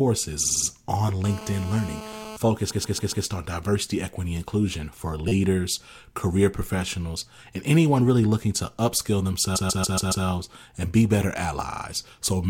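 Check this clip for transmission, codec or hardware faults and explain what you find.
Two kinds of fault are present: repeated frames at five points and GSM phone buzz once.

Repeated frames occur at 0.43 to 0.67 s, 2.69 to 3.25 s (just before "on diversity equity inclusion"), 5.28 to 5.32 s (right after "diversity equity inclusion for"), 9.55 to 10.25 s, and 11.71 to 11.83 s (after "and be better"). In each, a short block of compressed audio is written or sent again and the decoder plays it several times in a row. The blocks are about 48 ms, 139 ms, 9 ms, 139 ms and 28 ms long, replayed 4, 4, 4, 5 and 3 extra times, which fits a run of a few codec frames being duplicated. The result is a stutter, and the audio grows by roughly 0.23, 0.56, 0.03, 0.70 and 0.11 s.

GSM phone buzz runs from 1.24 to 2.37 s. A 2G handset in a call transmits in bursts at about 217 Hz, and the audio electronics rectify that radio energy into the signal path. 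It sounds like a hard, raspy buzz rich in harmonics, sitting about 14 dB below the speech, nearly steady through the span and unrelated to what is being said.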